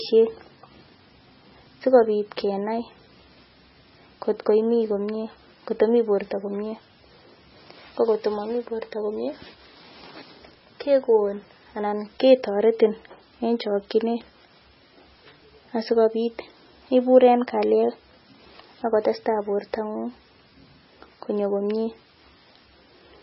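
From start to end, the speech has nothing above 5.6 kHz and sounds dull and smeared. The cause is likely low-bitrate audio saved at a high bitrate. The artefacts point to a very low-rate MP3 pass, re-encoded into a large MP3 that cannot restore lost detail.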